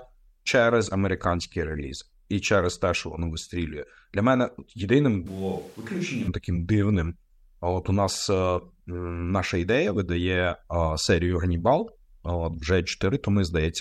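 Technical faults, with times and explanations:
5.27 to 6.28 s, switch to a distant microphone: just after "мене єдиним" the speech turns abruptly roomy and hollow, with a thinner low end, a level drop of about 5 dB, and room noise rising to roughly 25 dB below the speech. It returns to normal just before "таким дивним". The likely cause is the close microphone dropping out, leaving a farther one that hears more reflected sound and less direct bass.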